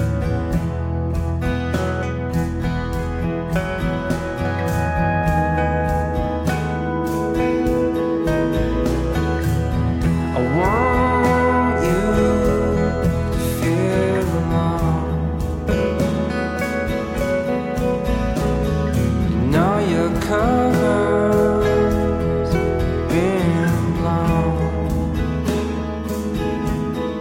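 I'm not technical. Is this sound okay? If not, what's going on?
Yes, this one's fine: nothing in it sounds broken or glitchy, so there's nothing to worry about.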